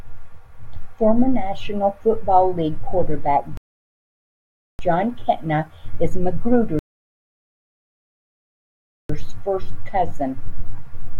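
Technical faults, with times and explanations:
3.57 to 4.79 s and 6.79 to 9.10 s, rebuffering stall: the speech halts into silence for about 1.2 s and then 2.3 s, and each time resumes exactly where it stopped. The player ran out of downloaded audio and waited for more, so nothing is lost but time is added.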